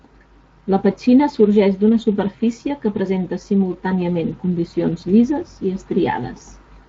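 From start to finish the speech has a grainy, hoarse roughness. That is Speex codec damage, plainly audible across the whole clip. Speex rebuilds speech from a predictive model plus a coded excitation signal. At the moderate rate this sound fits, around 20 kbps, too few bits go to that excitation, so its detail is replaced by coarse, noisy approximations.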